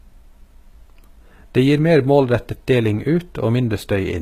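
Throughout the speech, the treble sounds plainly synthetic and gritty, with nothing above 14.9 kHz; this is likely HE-AAC compression rebuilding the highs, which fits a bitrate near 20 kbps.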